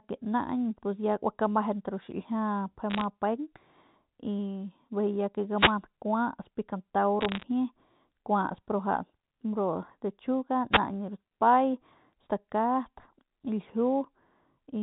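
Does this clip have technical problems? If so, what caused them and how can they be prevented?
Yes. From 2.90 to 3.04 s and again from 7.21 to 7.44 s, a patch of sharp ticks and gritty crackle sits on top of the speech while the speech underneath stays intact. These are bit errors on a digital phone line. On this 64 kbps G.711 mu-law link, every flipped bit corrupts one 8-bit sample, and with roughly half a percent of bits damaged, the errors that land on a sign or high-order bit become isolated spikes. Checking the line or interface for faults and running it with error detection and concealment keeps corrupted samples from reaching the ear.

Just after "ya que", from 5.56 to 5.74 s, and briefly again from 10.71 to 10.79 s, a short swish of static rises over the speech and partly masks it. This is a wireless microphone noise hit. Reflected radio paths cancel for a moment, the FM signal fades, and the receiver's own hiss comes up through the gap. 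Diversity receivers, good antenna placement and a clear line of sight between transmitter and receiver prevent these dropouts.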